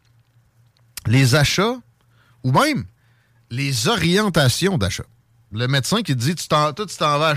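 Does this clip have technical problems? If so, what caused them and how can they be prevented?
No, no technical problems here.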